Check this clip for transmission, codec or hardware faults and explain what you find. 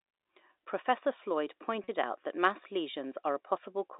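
One transmission fault stands out in this telephone-band speech, heard through G.711 coding with its narrow 300 Hz to 3.7 kHz range.

Packet loss with pitch repetition, 1.84 to 1.88 s: about 40 ms of audio went missing, which fits two 20 ms packets. The receiver bridged the gap by repeating the last pitch period, so the speech briefly sounds slightly held and buzzy before it carries on.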